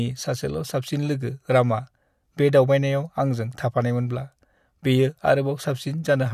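Nothing technically wrong turns up anywhere in this bit of speech, so there's no fault to point to here.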